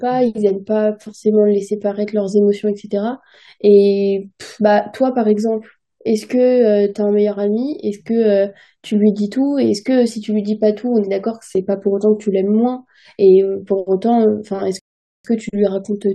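A rebuffering stall interrupts the speech from 14.79 s to 15.25 s, near the end of the clip. The player exhausted its downloaded audio and had to halt until more data arrived, so the sound drops abruptly into silence for about 0.45 s. When playback picks up again, it continues from exactly the point where it stopped, with nothing skipped or repeated. The only damage is the inserted gap, which stretches the timeline by that same 0.45 s.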